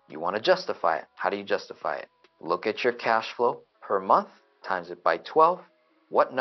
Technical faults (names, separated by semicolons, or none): none